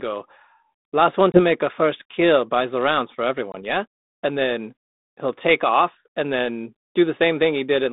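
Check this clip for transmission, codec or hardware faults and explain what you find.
Two short dropouts from packet loss on an ADPCM call, on a G.726 line at 32 kbit/s whose band runs from about 200 Hz to 3.7 kHz.

Packet loss on an ADPCM call, at 1.32 to 1.4 s (after "last one", before "make a first kill") and at 3.52 to 3.63 s (after "buys the rounds for"). Each time about one packet, 20 ms of audio, goes missing and is filled with silence. The receiving decoder's adaptive predictor and step size drift away from the sender's, so after each hard-edged gap the speech resumes slightly distorted until the decoder realigns.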